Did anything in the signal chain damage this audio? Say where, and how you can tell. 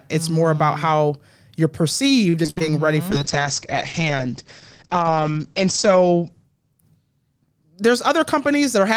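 Yes, three separate problems show up, all on the call path rather than in the recording itself.

At the network stage, repeated packet loss (robotic sound) runs from 2.29 to 2.62 s. Audio went missing in five separate holes, the longest about 60 ms. Each time, the receiver filled the gap by stretching out the last sound it had, so nearly half of that short span is synthetic patching. You hear it as choppy stuttering with fragments of the speech simply absent.

At the codec stage, a call bitrate drop sets in at 3.12 s and lasts until 7.76 s. The network's bandwidth estimate fell, and the encoder was pushed to code far more coarsely. The sound fits a fall from roughly 40 kbps to about 9 kbps, held at its worst for around 2.6 s. The audible bandwidth shrinks from 20 kHz to 8 kHz, so the speech turns muffled, losing its top-end detail.

In the receiver's playout, a jitter buffer speed-up runs from 8.16 to 8.89 s. 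Too much audio had built up in the buffer, so the receiver trimmed out pitch-period slices to catch up, removing a few tens of milliseconds in total. Playback runs at about 105% speed with the pitch unchanged, which makes that closing stretch of speech sound slightly rushed.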